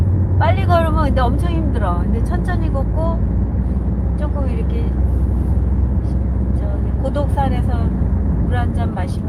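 No technical faults can be heard anywhere in this recording of sounds.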